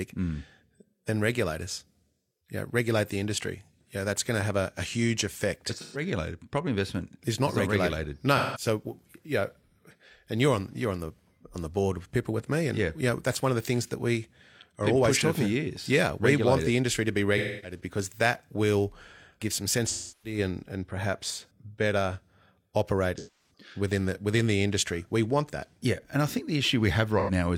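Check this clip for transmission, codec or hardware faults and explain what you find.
The speech has AAC frame loss with concealment at 5.79, 8.37, 17.37 (after "the industry to be"), 19.87 (after "that will give some"), 23.18 and 27.19 s, with gaps of about 0.09 to 0.34 s. The decoder fills each gap by re-using the last good spectrum, producing a smeared, phasey patch rather than a hard silent gap or click like a plain dropout.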